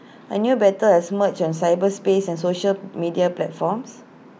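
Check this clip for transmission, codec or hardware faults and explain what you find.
No transmission, codec or hardware faults can be heard anywhere in the recording, so there is nothing to report.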